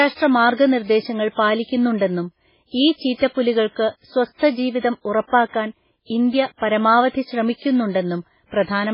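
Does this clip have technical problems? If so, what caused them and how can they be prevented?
Yes, the speech carries heavy MP3 compression damage throughout, likely from a very low bitrate. Nothing reaches above 5.3 kHz, so it's dull, and weak detail swirls and warbles as the encoder drops it frame by frame, which fits roughly 16 kbps. Encoding at a much higher bitrate would prevent it.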